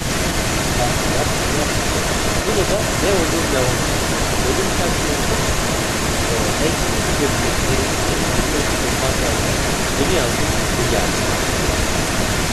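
An echo canceller likely clamped down during double talk, so from 0.00 to 0.04 s the speech is briefly suppressed, dipping a few decibels before recovering. Throughout the clip there is an echo leak: one side's canceller likely failed to remove loudspeaker pickup, so a copy of the speech returns about 0.33 s late, roughly as loud as the original.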